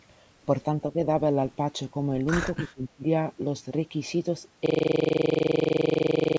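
Around 2.58 to 3.04 s the talker keeps ducking. Level drops by up to about 20 dB, and a little under a third of a second in total gets chewed out in patches. That pattern is most likely speech suppressed in double talk. The far end was talking at the same moment, the echo canceller couldn't tell this voice from its own loudspeaker echo, and it turned everything down. That's why the voice dips and breaks up instead of fading smoothly.

From 4.66 s right through to the end you get a system hang loop. A 42.67 ms slice of audio repeats exactly, about forty times, at 23.4 Hz. At that length it comes across as a coarse, rattling buzz. The loop length fits a 2048-sample ring buffer that the sound hardware kept cycling through while the machine or driver was frozen. The top end stops at 8 kHz, which fits the call's microphone path.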